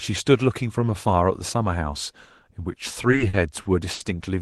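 From 2.93 s to 4.02 s the speech falls into repeated stalls, a stutter. Packets reached the receiver late, so its jitter buffer ran dry seven times. Each time, the last sound was stretched to cover the wait. About 190 ms was filled this way, roughly a sixth of that stretch, with the longest gap 70 ms. Nothing is lost. The speech drags and hiccups instead, over call audio that tops out near 12 kHz.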